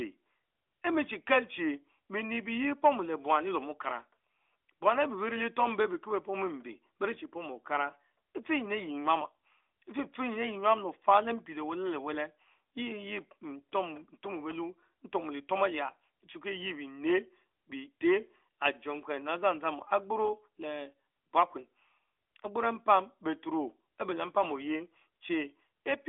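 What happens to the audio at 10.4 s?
Nothing goes wrong at 10.4 s: the speech continues intact, carrying only the usual narrowband sound of the AMR mobile codec, with nothing heard above about 3.7 kHz.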